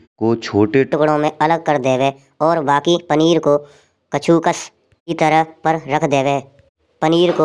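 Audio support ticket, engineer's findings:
Wrong sample rate from 0.93 s to end: playback clock runs faster than recording, no conversion; speech 1.38x faster, about 5.5 semitones higher, consistent with 16 kHz audio played at 22 kHz.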